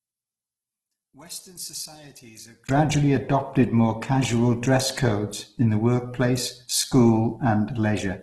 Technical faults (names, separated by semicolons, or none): Opus compression; one channel inverted